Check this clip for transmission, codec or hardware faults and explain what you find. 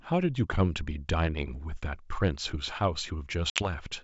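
One transmission fault is audible, carried over G.722 wideband coding that sounds clear up to about 7 kHz.

Packet loss on an ADPCM call, from 3.50 to 3.69 s: about 60 ms of audio, a few packets' worth, drops out and is filled with silence, leaving a hard-edged hole in the speech. Because ADPCM codes each sample relative to a running prediction and an adaptive step size, the decoder's state no longer matches the sender's after the gap. The speech resumes slightly distorted, and settles again within some tens of milliseconds.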